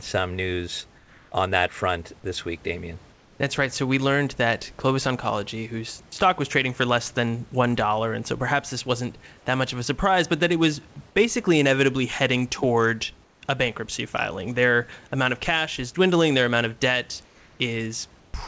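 It's a speech clip, and five short pauses have the real room background swapped out for comfort noise: 0.98–1.32 s after "some news", 3.12–3.40 s after "front this week damien", 9.38–9.46 s after "so perhaps this wasn't", 13.24–13.42 s, and 17.26–17.60 s. Each gap turns smooth and featureless, about 3–4 dB quieter than the surrounding room noise, most likely from discontinuous transmission filling silences with synthetic noise on a call path that tops out at 8 kHz.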